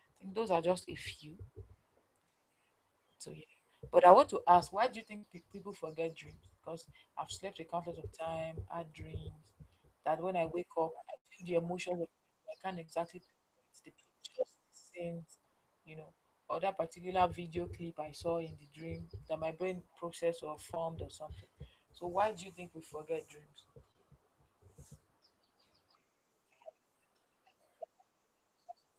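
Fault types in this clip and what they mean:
short concealed packet loss: Brief stretches of about 20 to 40 ms never arrived and were patched from the preceding sound, leaving small smears or wobbles, as after "think those are just" and before "or something".
burst of packet loss: Runs of about 60 to 80 ms went missing and were bridged with a fading continuation, producing a held buzz or hiss at 5.17 s and 11.17 s before the audio resumes further on.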